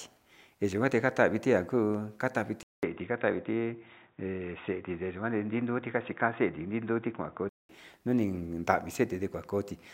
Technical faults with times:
2.63-7.69 input switched to a poorer device

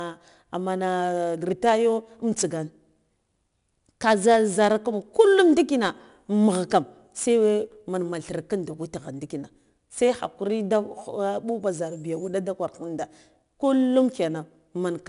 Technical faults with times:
0.00-15.09 4-bit ADPCM compression

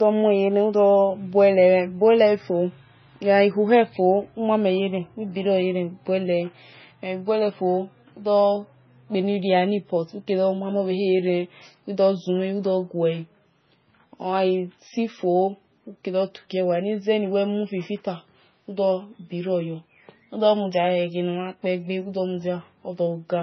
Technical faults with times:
0.00-23.43 low-bitrate audio saved at a high bitrate

